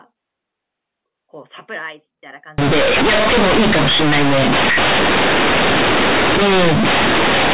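From 2.58 s to the end, there's companded audio read as linear: A-law bytes are being played as raw 8-bit samples without expansion. Every sign flip throws the waveform across half its range, so the speech turns into loud, harsh buzz with heavy noise filling the pauses.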